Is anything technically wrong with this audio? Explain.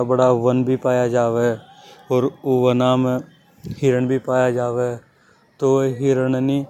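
No, nothing technically wrong can be heard in this speech recording. Nothing in what can be heard points to a problem in how it was captured, processed or delivered.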